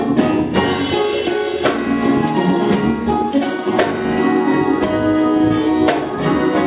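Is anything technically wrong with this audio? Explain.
No, nothing stood out as wrong on listening to this audio.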